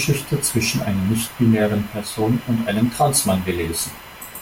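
A thin, whining buzz near 1 kHz, roughly 25 dB below the speech, runs through the whole clip, rising and fading with the computer's workload. This is computer activity noise: processor or graphics load shifting the ground shared with the audio circuitry.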